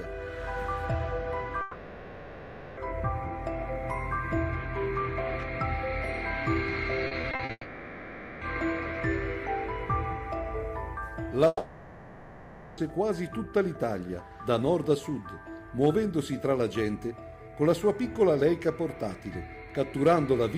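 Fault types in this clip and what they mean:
long network dropout: a fading buzz, around 1.2 s, 0.9 s and 1.3 s long, likely from audio that never arrived, so that part is lost.
repeated packet loss (robotic sound): choppy sound for under half a second, with five short holes of up to 40 ms patched by repeating sound.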